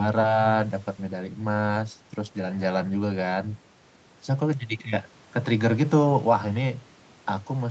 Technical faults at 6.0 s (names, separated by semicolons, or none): none